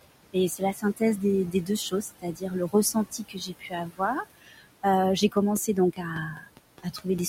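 Throughout the recording, noise suppressor artifacts are present. Steady room noise, about 14 dB below the speech, is pulled down by about 21 dB in the gaps and swells back under each phrase, leaving a residue. A spectrogram shows the background floor pumping frame by frame, with ragged, flickering specks where the residue survives.

From 0.57 to 1.01 s, 2.12 to 2.53 s, 2.93 to 4.01 s, 4.38 to 4.66 s, 6.33 to 6.59 s and 6.78 to 7.06 s, the suppressor mistakes parts of the speech for noise and causes speech cut by the noise suppressor. It turns them down by about 15 to 20 dB, for roughly 150 to 500 ms each time. Those syllables sound swallowed or faint. The waveform shows sudden dips in the envelope, and the spectrogram shows energy missing from the speech harmonics and consonant bands.

From 5.37 to 7.19 s, a train of clicks ticks over the audio at a regular pace of about five per second, roughly ten in all, standing well above the sound and audible in the pauses too. 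They are likely caused by electrical interference or a faulty connection or power supply. On a waveform they are sharp, evenly spaced spikes. On a spectrogram they are thin vertical lines spanning the whole frequency range.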